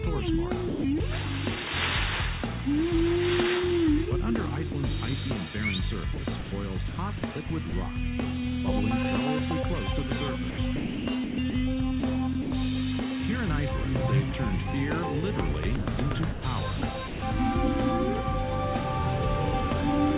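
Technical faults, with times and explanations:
0.68 to 1.0 s, sound chopped by the voice detector: about 180 ms of sound gives way to comfort noise, likely because the sender's detector toggled transmission off and on.
4.72 to 4.74 s, sound dropped by the voice detector: a 20 ms sliver is replaced by steady noise, likely where quiet sound was mistaken for background and not sent.
6.14 to 7.72 s, sound chopped by the voice detector: about 340 ms is swapped for comfort noise, likely from repeated detector switching, so the sound stutters.
10.5 to 12.52 s, sound chopped by the voice detector: the longest run, about 680 ms lost to synthetic noise, likely as the detector cut in and out repeatedly.
15.76 to 17.22 s, sound chopped by the voice detector: about 400 ms becomes comfort noise, likely through on-off detector gating, giving choppy sound.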